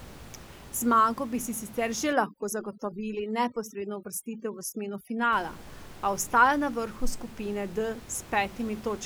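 Right after "bi si sicer že", at about 2.13 s, overdone noise removal kicks in and holds until about 5.33 s. The noise reducer is set far too aggressively here, so any frequency band that sits close to its idea of the background gets pushed right down or dropped. Between phrases you get near silence with little twinkling specks, and the speech has its quieter parts eaten along with the room noise, which otherwise sits about 19 dB under the speech.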